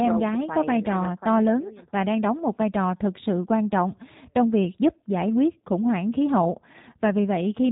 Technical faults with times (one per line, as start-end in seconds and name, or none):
0.00-7.72 G.729 codec